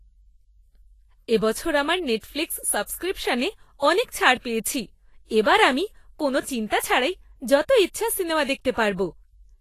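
Speech, with Vorbis compression damage plainly audible throughout. Nothing sounds above 14.2 kHz. The treble turns hissy and grainy, tones are roughened, and attacks blur. That is likely low-bitrate Vorbis coding, which fits a rate near 29 kbps.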